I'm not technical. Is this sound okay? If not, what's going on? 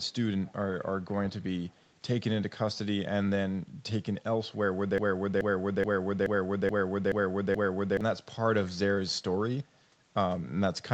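No. There are two problems. Right at the start, from 0 to 0.14 s, again at 0.47 to 0.52 s and at 1.69 to 1.87 s, there's an echo leak: a very faint copy of the speech trailing about 0.23 s behind, likely from someone's speaker bleeding back into their microphone.

Then from 4.98 to 8.01 s there's a broken-record loop: one 0.43-second scrap repeats seven times back to back, like a skipping CD. Whatever should have played there is simply gone, likely because the stream stalled and kept replaying its last piece.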